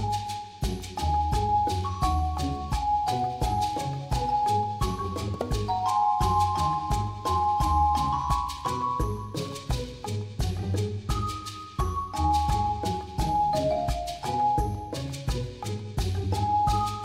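No technical faults can be heard anywhere in the clip. Nothing in the sound calls for a time, a value or a cause to be noted.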